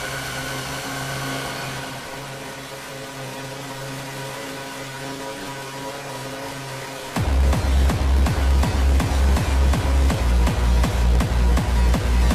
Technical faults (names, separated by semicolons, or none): block size mismatch (truncated)